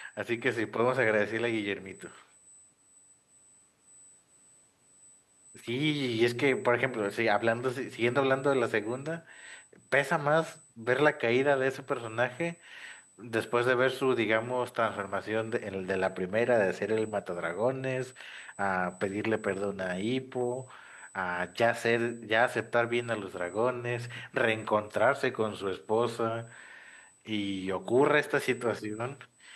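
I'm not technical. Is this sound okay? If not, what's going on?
No. A thin, steady high-pitched whine sits under the speech for the whole recording, at a fixed pitch of 8 kHz. This is USB whine. A USB connection draws power in very fast regular bursts, 8,000 times a second, and that rhythm leaks into the audio through the power or ground wiring. It is well below the speech in loudness. It never changes pitch, which marks it as electrical and not part of the room.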